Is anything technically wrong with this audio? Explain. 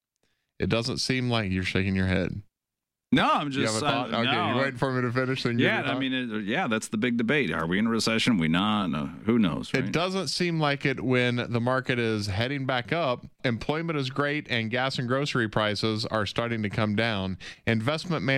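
Yes. There is a single loud pop from 3.16 to 3.19 s. It is one short, sharp pulse peaking a few decibels above the surrounding level, and the sound continues underneath it without interruption. The likely cause is a sudden voltage step or spike, from a plug, switch, static discharge or driver glitch, entering the signal chain, with the downstream circuitry shaping it into a brief transient that is heard as a distinct pop.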